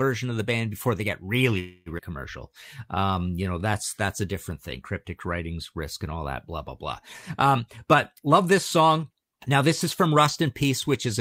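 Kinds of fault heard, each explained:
call audio freeze: after "before they get really", 1.59 to 1.89 s, the last sound is stretched into a fading buzz for about 270 ms; it likely comes from late packets. On a spectrogram it shows as a smeared, decaying band with no new detail.
skip ahead: at about 1.98 s, roughly 150 ms of speech is gone and the audio jumps forward almost seamlessly; the waveform shows an abrupt join with no gap.
jitter buffer slow-down: 2.49 to 3.60 s, just before "that's that's a different", speech runs at 88% speed with unchanged pitch, adding about 146 ms; on a spectrogram the harmonics stay level while syllables stretch.
jitter buffer speed-up: 7.59 to 10.66 s, speech runs at 108% speed, with roughly 300 ms trimmed in small pitch-period pieces; syllables look compressed in time on a spectrogram while harmonic spacing stays unchanged.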